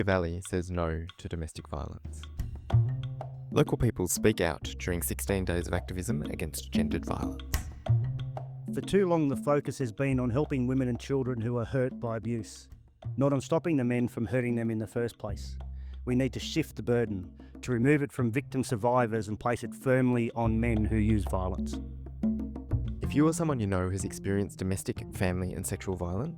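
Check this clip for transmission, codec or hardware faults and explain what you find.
No transmission, codec or hardware faults are audible here.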